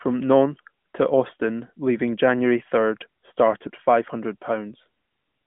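No technical faults detected.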